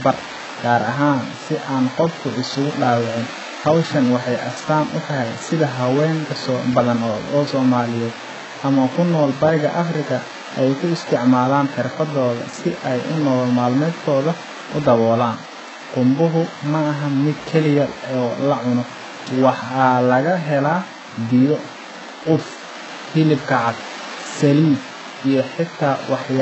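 HE-AAC compression is the likely cause of the heavy damage throughout the speech. Nothing reaches above 8 kHz, and the upper band is rebuilt from copied lower bands rather than coded, so s sounds turn gritty and lispy, which fits a bitrate near 8 kbps.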